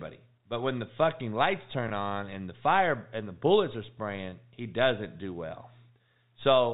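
Speech over a telephone channel with the usual 4 kHz ceiling, hit twice by packet loss with pitch repetition: a single 20 ms packet at 1.88–1.90 s, after "when the fucking lights", and at 4.30–4.32 s, before "he doesn't do well". Each gap sounds like a briefly held, buzzy tone rather than the hard silence of a plain dropout.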